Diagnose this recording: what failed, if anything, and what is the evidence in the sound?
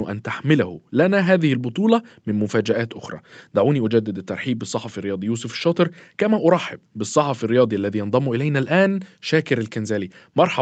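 Nothing stood out on listening: the speech carries the expected narrowing of a call path, with nothing audible above about 8 kHz, and no failure can be heard at any stage.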